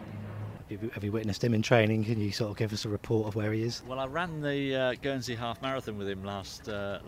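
No technical faults are audible.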